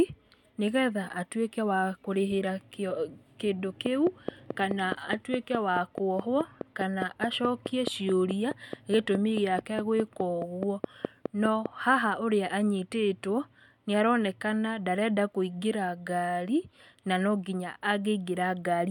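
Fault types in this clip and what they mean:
Train of clicks: steady, evenly spaced ticking, 4.75 clicks per second from 3.86 to 11.67 s, standing well above the speech; likely electrical interference or a faulty connection.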